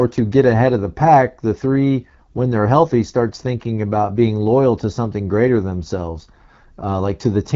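Throughout the speech, the AMR wideband (HD Voice) codec is plainly audible. The sound is rough and raspy, which points to one of its lowest rates, around 8.85 kbit/s. The vocal tract model struggles here. Nothing reaches above 7.4 kHz.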